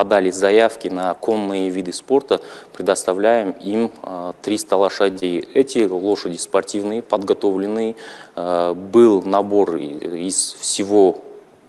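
At 5.11 s, running to 5.18 s, a short stall from a late packet holds the sound for 42 ms. The packet missed its deadline, the jitter buffer ran dry, and the receiver stretched the last audio until the data arrived, then resumed exactly where it left off. Nothing is lost, so you hear an over-long, faintly buzzy sustain rather than a gap, and the audio after it sits 42 ms later until the speed-up.

Just after, from 5.20 to 5.24 s, comes a short concealed packet loss. About 20 ms of audio never reached the decoder, and the receiver filled roughly 19 ms by extending the preceding sound before crossfading into the real signal. Unlike the stall, material is actually missing here. It comes across as a brief smear or wobble where a moment of the original simply vanishes, with no added delay.

From 10.09 to 10.60 s, a jitter buffer speed-up compresses the audio. Too much was queued, so the receiver trimmed short pitch-period slices repeatedly, around 50 ms in all, and playback runs at 108% with unchanged pitch. 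This sounds hurried over half a second, spread out rather than concentrated in one glitch as the concealment is. Throughout, the Opus call path keeps its 12 kHz upper band limit.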